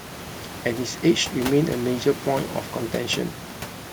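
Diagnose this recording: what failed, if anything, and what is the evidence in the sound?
Nothing in this speech recording points to a failure at any stage of the chain. What can be heard is the room noise around the microphone, sitting about 15 dB below the speech, which belongs to the recording itself rather than to the system.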